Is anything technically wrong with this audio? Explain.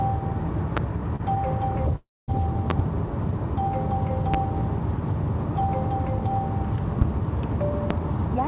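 Yes. There are three kinds of fault: loud pops, a short stall from a late packet, and a call audio freeze.

Loud pops occur at about 0.77 s, 2.70–2.82 s (a double pop), 4.34 s, 7.01 s and 7.91 s. Each is a sharp thump about 20 dB above the surrounding sound, except the one at 4.34 s, which is about 15 dB above it. The sound carries on underneath each one. The likely cause is a sudden voltage step, from a plug, switch, static or driver glitch, added to the signal, with the following circuitry shaping it into a brief pulse. Unlike a stall or freeze, nothing is held or interrupted. The pop simply sits on top of the sound.

A short stall from a late packet occurs at 1.16–1.21 s. The receiver ran out of audio for 29 ms, held the last sound until the late packet arrived, then continued from the same place with nothing lost. It is heard as a momentary smear or slight buzz. It is far too short to read as a gap, which separates it from the freeze that follows.

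A call audio freeze occurs at 1.96–2.30 s. For 320 ms the audio stops progressing. The last sound is drawn out as a fading buzz, then falls to silence for about 200 ms before the sound resumes exactly where it left off. The likely cause is packets held up in the network, which emptied the jitter buffer. The audible silence and resumption without skipping distinguish it from a dropout that loses material. Throughout, the call path leaves nothing above 4 kHz, consistent with G.711 mu-law at 64 kbps.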